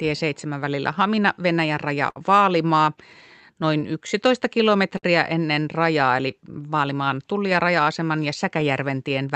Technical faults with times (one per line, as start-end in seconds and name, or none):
0.00-9.35 clock drift between sender and receiver
0.06-9.23 repeated timing corrections
2.10-2.18 short stall from a late packet
3.81-5.05 scattered short gaps
6.68-8.63 scattered short gaps